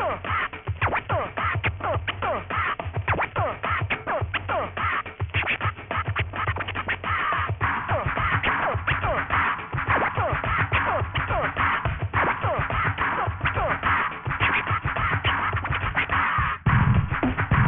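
Aliasing runs through the whole clip. The sound was resampled downward without a proper low-pass filter. Content above about 3 kHz folds back as false, unrelated tones, roughly 10 dB below the real sound. The spectrum stops hard at 3 kHz, which fits a 6 kHz rate. Bright detail turns gritty and metallic.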